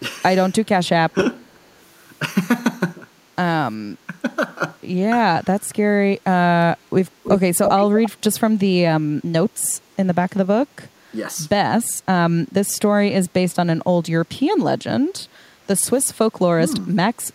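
Around 1.48 to 1.68 s there's a faint echo leak, a barely-there copy of the speech trailing about 365 ms behind. It comes back properly at 7.23 to 7.38 s and again at 7.63 to 8.1 s, now roughly as loud as the speech itself and lagging about 330 ms, so you get doubled scraps. The likely cause is the far end's echo canceller letting its loudspeaker pickup slip back into the call.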